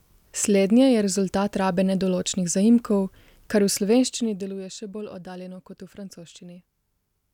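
Speech clip with zipper noise from 3.92 to 4.58 s: a level drop of about 15 dB is applied in coarse unsmoothed steps, around fifty a second, and each jump adds a small click, producing a ticking buzz that rides on the audio while the gain falls.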